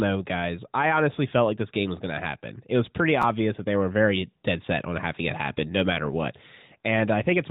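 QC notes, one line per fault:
3.22–3.24 s, chunks out of order: between "was pretty" and "that they were very", one short slice, which fits a chunk of about 12 ms, plays a chunk late. The sound briefly stutters out of sequence across the three hard joins.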